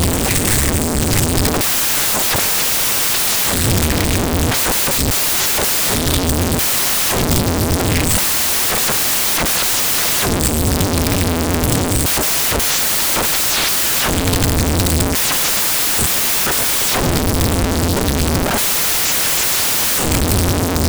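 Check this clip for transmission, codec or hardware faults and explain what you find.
One fault is present, running through the whole clip: samples built from the wrong bytes. The reader assembles each sample from a misaligned or byte-swapped pair, so the rapidly changing low-order bits land in the most significant position. That turns every value into something close to random, and the speech is heard as loud, harsh broadband noise, close to white on the louder sounds.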